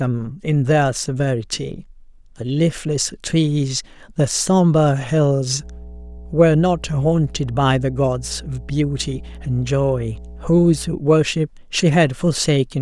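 From 5.60 s to 11.0 s, mains hum enters under the speech: a steady 60 Hz tone, fairly prominent at roughly 15 dB below the signal. A ground loop or nearby transformer couples power-line current into the signal path. A spectrogram shows a flat horizontal line at 60 Hz.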